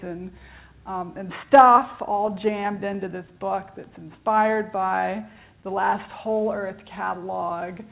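The sender's audio clock runs about 3 percent slower than the receiver's for the whole clip, a case of clock drift between sender and receiver. The jitter buffer keeps running low, so the receiver must stretch what it has to avoid running dry. Heard through the call path's G.711 A-law coding, which leaves nothing above 4 kHz, the drift shows up as a slightly unsteady, dragging pace rather than any single obvious break.

Those repeated timing corrections run from 0.31 s to 7.74 s. Because material arrives too slowly, the receiver repeatedly duplicates short pieces, all in the same direction and at uneven spacing. Playback runs at about 98 percent speed, and in total roughly 150 ms is added over the stretch. Each individual repeat is small, so the result is faint hiccups and a tempo that seems to sag and recover rather than clear stutters.

Between 1.93 s and 3.30 s there are scattered short gaps, about five of them, where packets arrived late or were lost. 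The receiver patched each hole by carrying the last sound forward, filling around 40 ms in all. No single gap exceeds about 10 ms, and only about 3 percent of that span is concealed, so these register as brief ticks or slight smears layered over the drift-related unevenness.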